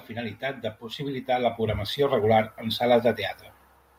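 From 0.08 to 3.11 s the automatic gain control judged the speech input too quiet and kept raising its gain, by about 9 dB overall. This automatic gain rising lifts voice and background together, so the whole sound swells steadily louder across those three seconds.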